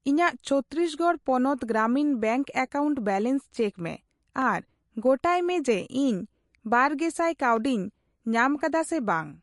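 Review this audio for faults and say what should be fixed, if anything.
The speech carries plainly audible MP3 compression damage throughout, likely from a low bitrate near 48 kbps. Weak frequency lines switch on and off between frames, and nothing sounds above 11.3 kHz. A spectrogram would show a flat ceiling there with flickering gaps below it. To prevent this, encode at a higher bitrate or keep an uncompressed master.

There are two sharp clicks, at 4.42 s and 7.57 s, each likely from dropped samples, roughly a tenth of a millisecond lost. Each appears as a thin vertical spectrogram line and a sudden waveform step. To prevent this, give the capture or playback path enough buffer headroom that no samples are skipped.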